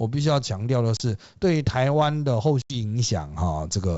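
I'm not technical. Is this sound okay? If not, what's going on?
No. The speech drops out twice, at 0.97 to 1.01 seconds for about 30 ms and at 2.62 to 2.77 seconds for about 80 ms, each time with a sudden silent gap. When the speech comes back it can jump in level or click and sound rough for a moment. This is packet loss on an ADPCM call. Chunks of audio went missing in transit, the first gap fitting a few lost packets and the second several more. The receiving end then briefly loses track of how loud and how shaped the sound should be. The wideband telephone coding (G.722) carries the speech cleanly around these gaps.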